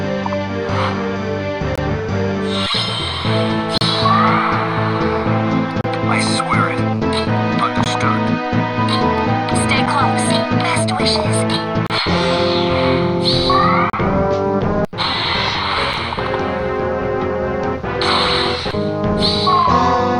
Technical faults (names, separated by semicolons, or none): gap between stream segments